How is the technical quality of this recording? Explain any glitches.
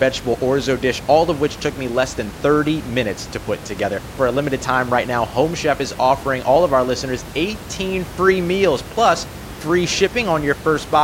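Nothing stood out on listening to the speech, apart from a low room background sitting about 15 dB beneath it.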